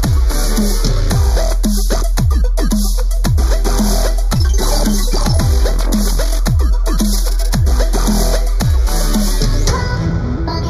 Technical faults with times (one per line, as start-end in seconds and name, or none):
0.00-10.70 channel delay (comb filtering)